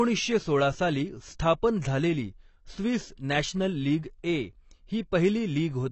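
Low-bitrate AAC compression, likely AAC-LC at something like 24 kbps, has stripped this speech recording of everything above about 8.1 kHz for its whole length, leaving the voice dull and smeared with a plainly audible warbling, fizzy texture on sustained sounds and sibilants.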